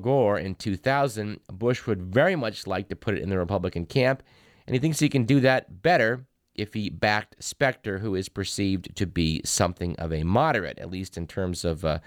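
Sample clock jitter runs through the whole recording. The converter's clock wandered in timing, on the order of a microsecond or two, so each sample was captured slightly early or late at random. Because the resulting error scales with how fast the waveform is changing, it sits roughly 40 dB below the speech and rides on it: a hiss-like roughness that grows on loud and bright passages and drops away in the pauses.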